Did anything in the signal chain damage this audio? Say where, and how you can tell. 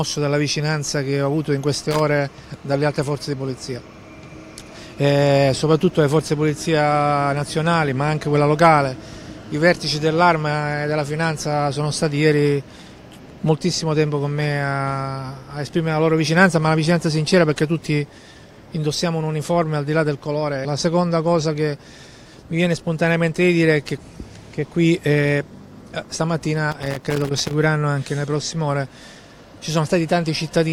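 Yes, loose connector crackle in the analogue wiring. Irregular scratchy bursts at 1.74–2.00 s and 26.72–27.53 s. A worn contact intermittently breaks, chopping the signal.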